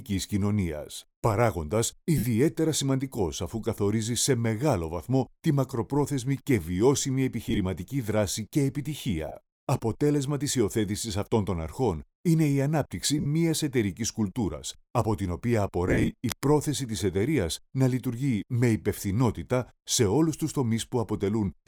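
The audio has five bursts of lost LE Audio frames, at 2.18 to 2.24, 7.47 to 7.58, 9.28 to 9.35, 13.18 to 13.26 and 15.88 to 16.11 s. Each gap, about 45 to 130 ms of missing audio, fits the 7.5 ms LC3 frame size. The decoder fills it with noisy smears on the spectrogram, and the waveform dips where the concealment fades. Right after, from 16.29 to 16.45 s, cable scratch noise appears as a dense, uneven broadband speckle, roughly 10 dB below the signal. It is likely caused by a worn cable or connector being moved.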